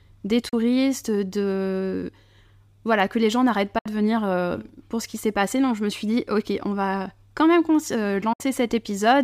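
A speech recording with three brief digital broadcast dropouts, at 0.49 to 0.54 s, at 3.78 to 3.86 s just after "que les gens n'arrêtent", and at 8.33 to 8.41 s. Each time the sound fades to silence over roughly 8 ms and then resumes. The first hole loses 32 ms of programme, which fits a single failed frame. The other two lose 64 ms, consistent with two frames. The receiver muted until valid frames arrived again, so the speech in those gaps is gone.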